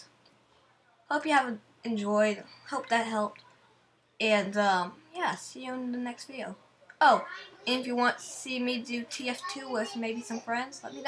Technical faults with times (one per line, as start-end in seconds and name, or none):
none